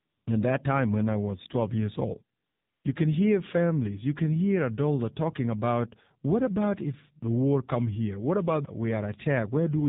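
From start to finish the speech is confined to a narrow band with nothing above 4 kHz, and its coded, synthetic texture is plainly audible. This is the AMR narrowband mobile codec, AMR-NB, which samples at 8 kHz and rebuilds the voice from a vocal tract model fed by a pitch predictor and a few pulses per 5 ms. The sound points to one of its lower modes, around 7.4 kbps.

In the first 0.26 s, and again from 2.38 to 2.84 s right after "years old", the background gives way to a steady, smooth hiss that switches in and then out. This is AMR comfort noise. The sender judged the talker silent and stopped sending speech frames, for 255 ms and then 460 ms, so the receiver filled each gap with synthetic noise built from a coarse description of level and spectrum.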